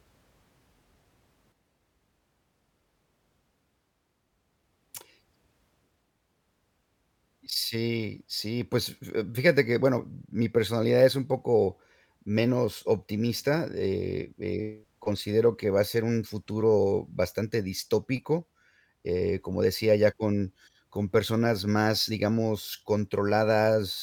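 At 1.52 s the speech drops abruptly by about 6 dB and stays lower to the end, likely because one channel drops out before the mono sum. A simple gain cut would leave everything, whereas here whatever existed only in that channel vanishes.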